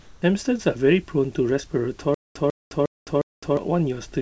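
From 0.00 to 0.22 s, the background sounds like comfort noise in place of the real room sound: a steady, featureless hiss about 3 dB quieter than what follows. The sender likely stopped transmitting during the pause and the receiver synthesised noise to fill it.

From 2.14 to 3.57 s there is a stutter with silent gaps: a 146 ms fragment repeats four times, each followed by about 211 ms of digital silence, every 357 ms. The stream likely stalled, replaying its last fragment at each retry while the audio due then was lost. Throughout, nothing is present above 8 kHz, which fits a wideband call codec such as G.722.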